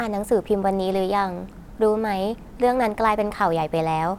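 At 0.94 s a DC step shifts the waveform's zero line, producing a low thump. The offset then decays slowly, as through a 2 Hz high-pass.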